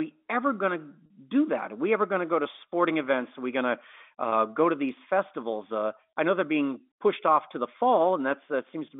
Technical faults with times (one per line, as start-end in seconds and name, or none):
1.06-1.10 packet loss with pitch repetition
1.32-9.00 sample clock jitter
4.30-4.32 packet loss with pitch repetition